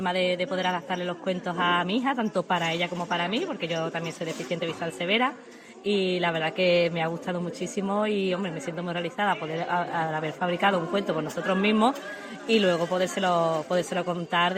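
No technical faults can be heard anywhere in the audio.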